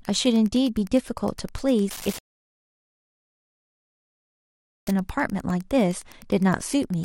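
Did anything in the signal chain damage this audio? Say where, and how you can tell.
Yes. In the analogue wiring, Wi-Fi interference adds steady ticks every 102.4 ms, about 25 dB below the speech. The circuit is rectifying beacons, and the regular ticking sets it apart from mains hum.

At playback, a rebuffering stall silences the audio from 2.18 to 4.87 s, adding about 2.7 s. The speech resumes exactly where it stopped, so unlike a dropout, nothing is lost.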